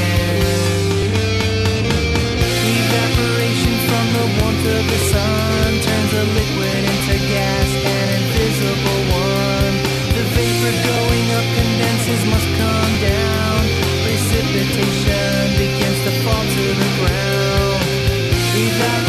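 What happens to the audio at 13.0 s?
Just before 13.0 s, at 12.95 s, there is an overlap between stream segments. Two adjacent chunks, consistent with 2-second segmentation, carry time stamps that overlap, and the player discards the overlapping stretch even though that audio was not actually duplicated. Roughly 17 ms of material goes missing, so the waveform steps abruptly from one point to a later one. It is heard as a brief click or tiny skip.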